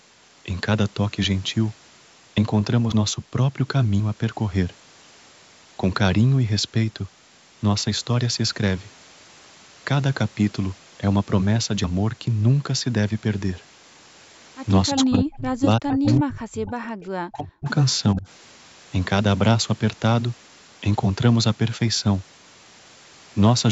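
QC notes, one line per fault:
2.92 s, 4.00 s, 11.84 s, dropped buffer (overrun): at each point the speech skips forward with an abrupt join, with no gap of silence. Roughly 40 ms of sound is missing each time. The likely cause is the capture side failing to read its buffer before the hardware wrote over it, so the audio on either side of the lost block is butted together directly.
14.91–16.73 s, 17.32–17.68 s, 18.13–18.27 s, speech suppressed in double talk: the near talker's level dips while the far side is also talking. In the first two spans the deepest cuts reach about 40 dB, effectively gaps, and in the last span the dip is shallower at about 15 dB. The likely cause is the echo canceller being unable to tell the talker from loudspeaker echo and attenuating everything during overlap.
14.98–15.18 s, 15.90–16.14 s, echo leak: a delayed copy of the speech comes back about 360 ms late, trailing the original. 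The first burst is strong, about 5 dB below the direct speech, and the second is weaker at about 15 dB down. Both are brief fragments rather than a continuous repeat. The likely cause is residual loudspeaker sound picked up by a microphone at the other end and not fully cancelled, so part of it was returned.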